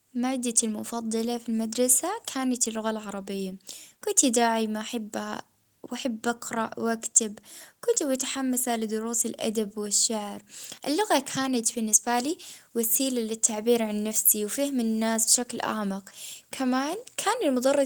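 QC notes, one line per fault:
Nothing stood out on listening to the speech in this clip.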